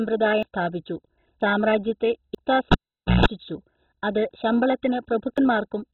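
Across the whole speech clip the sound is dull and muffled, with a gurgling, grainy roughness. This is likely MP2 compression at a very low rate, around 16 kbps. With so few bits to share among its 32 sub-bands, the encoder shuts off the upper bands entirely and quantises the remaining ones so coarsely that they smear and bubble.

At 0.43 s, just before "സ്ഥാപിച്ചു സാമ്രാജ്യത്തെ", the speech jumps forward. The same skip happens at 1.41 s and again at 2.35 s, right after "സ്ഥാപിച്ചു സാമ്രാജ്യത്തെ". Each time roughly a tenth of a second disappears with no gap of silence. A shorter jump at 5.38 s loses only a few hundredths of a second. These are dropped buffers from an overrun, likely caused by the recording software falling behind so that the hardware overwrote unread samples and the two sides were joined directly.

From 2.72 s to 3.26 s a pop cuts the sound to near silence for about half a second. 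Within that gap a 60 Hz mains buzz lasts about 0.16 s, and a second pop marks the return of the audio. This is a live cable pulled and plugged back in, with the buzz coming from the moment when only the plug tip made contact.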